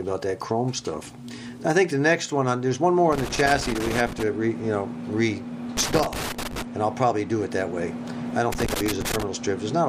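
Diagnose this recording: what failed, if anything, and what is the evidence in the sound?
The failure is in the analogue wiring: loose connector crackle. Three irregular bursts of crackle and scratching break into the sound from 3.13 to 4.23 s, 5.77 to 6.62 s and 8.52 to 9.23 s. A worn or dirty contact somewhere in the cable or jack is making and breaking as it shifts. That chops the signal in and out, and any DC present on the line turns each interruption into a pop, giving the ragged texture.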